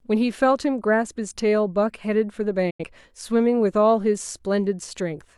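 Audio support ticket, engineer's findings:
Digital broadcast dropout, 2.70 to 2.84 s. Symptom: speech fades out over about 8 ms into a silent hole, then resumes mid-programme with no catch-up. Probable component: receiver decoder mute logic. Mechanism: corrupted or missing frames fail checksum, so the decoder mutes until valid frames return. Roughly 85 ms of programme is gone, consistent with two lost frames. The content sent during the gap is unrecoverable.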